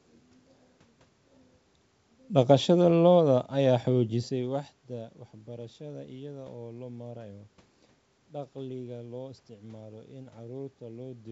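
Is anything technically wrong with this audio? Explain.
No, nothing in this speech clip points to a technical fault. The room's background noise sits under the voice, the level shifts around 4 s as the talker moves relative to the microphone, and the audio carries the bandwidth of G.722 wideband telephone coding, with nothing above about 7.7 kHz.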